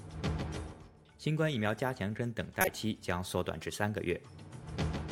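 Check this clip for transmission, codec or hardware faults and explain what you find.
One fault is audible. Corrupt frame decoded, 2.61 to 2.68 s: damaged bits in roughly two compressed frames were decoded anyway, misplacing spectral energy and producing a brief burst of wrong sound with an error peaking around -10 dBFS.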